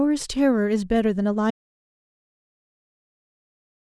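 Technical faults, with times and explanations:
1.51 s to end: audio dropout to silence. The speech cuts off mid-flow and never returns, leaving dead digital silence with no room tone for the final 2.4 s. This likely comes from lost input, with the recorder continuing to write zeros.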